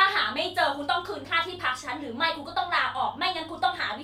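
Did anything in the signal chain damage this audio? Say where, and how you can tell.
No, nothing in the signal chain audibly damaged this speech.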